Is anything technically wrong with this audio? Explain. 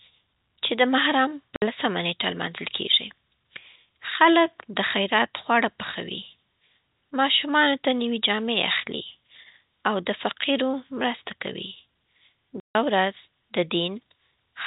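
Yes. The speech has two gaps from packet loss filled with silence, on a line that carries the band-limited, telephone-like sound of G.711 coding, with nothing above 4 kHz. At 1.56 to 1.62 s (60 ms) and again at 12.6 to 12.75 s (150 ms), audio packets never reached the receiver, which simply inserted silence where they should have been. Both gaps are multiples of 30 ms, which points to a 30 ms packet size. You hear the speech abruptly drop out and resume, with hard edges.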